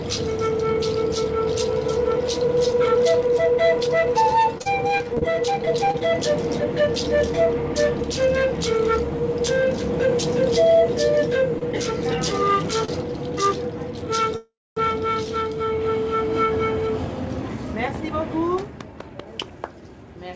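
From 4.58 to 5.23 s, and again from 5.65 to 6.03 s, repeated packet loss gives the sound a choppy, robotic edge. Six short holes in the first stretch (the longest 35 ms) and four in the second (the longest 24 ms) are each patched by extending the preceding sound. About 0.1 s and 40 ms of real audio are lost. On a spectrogram these patches appear as smeared, repeating harmonic bands with abrupt seams.

At 11.59–11.63 s and 12.85–12.90 s there are two short stalls from a late packet. Each time the buffer ran dry and the last sound was held, for 24 ms and 34 ms respectively, before playback resumed exactly where it stopped. Each is heard as a brief drawn-out hitch. The waveform shows a small stretch of repeated cycles.

From 14.36 to 14.78 s a call audio freeze puts a 402 ms gap into the audio. This was likely caused by packets held up in transit. A fading buzz continues the last sound, then about 250 ms of silence follows before the audio carries on. 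On the waveform this shows as a decaying tail ending in a flat line.

From 17.41 to 19.60 s a jitter buffer speed-up removes roughly 0.3 s of audio in many tiny pitch-period cuts. The sound runs at 112% speed with its pitch unchanged and feels hurried. The spectrogram looks horizontally compressed, with harmonics staying level. Throughout the clip, the call codec's spectrum stops at 8 kHz.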